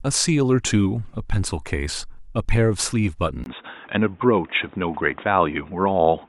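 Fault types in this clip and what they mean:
Input switched to a poorer device: from 3.44 s to the end, the speech turns dull and boxy, likely because recording moved to a lower-grade microphone or a headset's call profile. On a spectrogram the upper band disappears, with nothing above 3.8 kHz, and a faint new background noise appears roughly 30 dB below the speech. The waveform shows a brief 20 ms silence at the switch, while overall level stays about the same.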